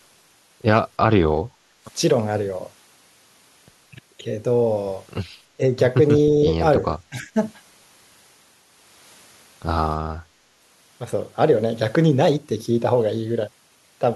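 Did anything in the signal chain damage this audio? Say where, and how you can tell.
Yes. Speech suppressed in double talk, at 1.7 to 1.9 s, 5.57 to 5.64 s and 6.79 to 7.37 s, points to the call-processing stage. The speech level suddenly falls by roughly 20 dB in the first dip and roughly 15 dB in the other two, then recovers. The longest dip, near 7 s, affects roughly 300 ms of speech in all. The likely cause is an echo canceller that mistook this talker for loudspeaker echo while the far end spoke, and turned the speech down.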